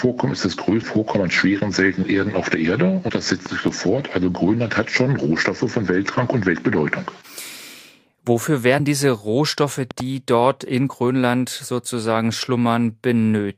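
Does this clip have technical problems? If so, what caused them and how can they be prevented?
Yes. A loud pop, actually a quick double pop about 10 dB above the sound, hits at 3.46–3.70 s and again at 9.91–10.02 s, with the audio continuing underneath, unlike a dropout. The likely cause is an electrical pulse from a plug, switch or static. Secure connections and mute before switching.

Compressed frames skipped at 8.79 s: about two frames, roughly 40 ms, are missing, so the audio jumps ahead. Use intact files and error-checked transfers.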